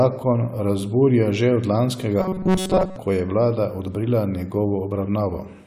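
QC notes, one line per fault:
2.20–2.96 s, robotic sound from repeated short buffers: the speech turns into a stiff, metallic drone pitched at 188 Hz that loosely tracks the syllables. The likely cause is audio arriving too slowly, so the playback fills the gaps by looping the most recent slice, which fits a buffer of about 5.3 ms, the period of 188 Hz. Most of this stretch is repeated material, and the original audio underneath is dropped.
3.87 s, compressed frames skipped: the speech jumps forward. Roughly 50 ms of audio never plays, because whole coded frames are missing or were rejected as damaged by the decoder. The skipped span is a whole number of frames.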